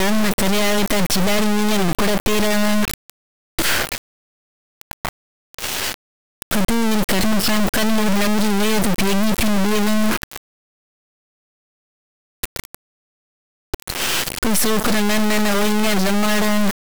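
Throughout the speech, integer read as float: 32-bit integer samples are interpreted as 32-bit floats, so output slams between silence and the clipping limit, giving a harsh, buzzing square wave.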